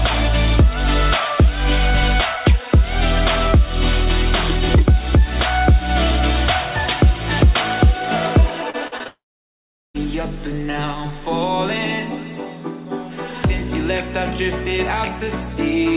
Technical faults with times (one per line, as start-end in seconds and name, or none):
8.70-9.07 repeated packet loss (robotic sound)
9.07-9.96 long network dropout